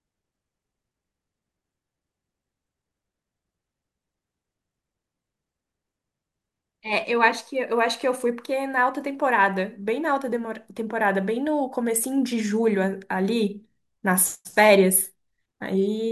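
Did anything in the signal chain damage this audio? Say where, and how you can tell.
No, nothing in the chain audibly damaged this speech recording at any stage, from capture through to playback.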